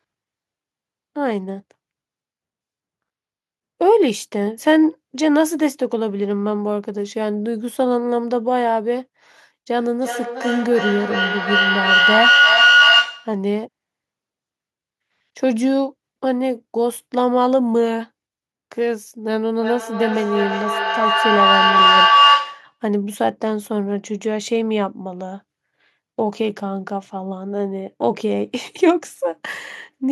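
From 9.76 to 13.44 s, and again from 19.5 to 22.8 s, a feedback howl takes over the speech: sound re-enters the microphone from a nearby loudspeaker and gains on each loop. The first locks near 1.5 kHz, the second near 1 kHz, both peaking about 6 dB above the speech and pulsing roughly every 300 ms. A spectrogram shows a bright, narrow horizontal line with regular beating; the waveform swells into a dense, rising envelope.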